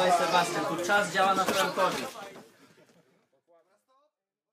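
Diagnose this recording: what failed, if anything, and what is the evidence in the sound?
Nothing failed at any stage; the only level change is a deliberate smooth fade-out beginning around 2 s and running to the end, with no click or hard edge.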